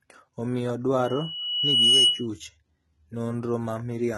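Throughout the speech, the treble sounds gritty and lispy with nothing above 11.8 kHz, likely heavy HE-AAC compression at a low bitrate near 16 kbps. A spectrogram shows a hard ceiling and smeared, copied-looking upper bands. From 1.04 to 2.27 s, a loudspeaker feedback squeal at 2.9 kHz swells over about a second to well above the speech. It appears as a single bright horizontal line that thickens as it grows.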